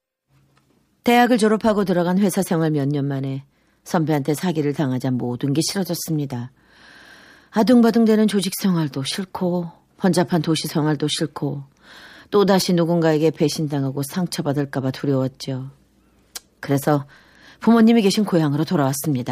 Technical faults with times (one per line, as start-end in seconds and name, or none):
none